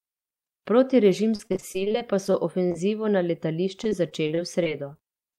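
Speech with repeated packet loss (robotic sound) from 1.35 to 2.76 s and again from 3.84 s to the end. Over a dozen holes up to 34 ms long are patched by stretching the preceding sound, giving a choppy texture with pieces missing. This shows as smeared, frozen-looking slices in the spectrogram.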